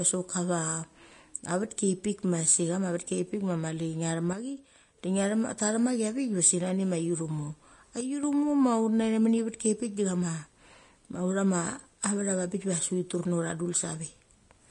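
From the start, the speech carries the marks of Vorbis compression, likely at a low setting. Nothing is present above 10.6 kHz, so the top of the spectrum is cut away. The codec damage is plainly audible. Treble detail is quantised so coarsely that it turns into noise. The result sounds hissy and grainy. Tones are roughened and attacks are blurred. The damage fits a bitrate of around 33 kbps.

At 4.33 s the level drops suddenly by about 6 dB. It recovers at 4.98 s. The same drop returns from 8.01 s to 8.23 s. These are likely one channel dropping out of a stereo source before the mono mix. With one side missing, the summed signal falls by half in amplitude. The sound itself does not change in character. It simply gets quieter for those spans, then jumps back up.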